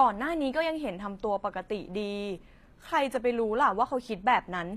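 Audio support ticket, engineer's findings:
Treble on the speech gritty and metallic throughout, sibilants lispy. Likely HE-AAC compression at a low bitrate, consistent with about 24 kbps: upper band rebuilt by spectral band replication from copied lower bands, so high harmonics misalign across the crossover.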